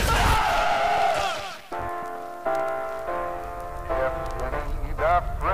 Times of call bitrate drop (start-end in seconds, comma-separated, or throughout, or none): none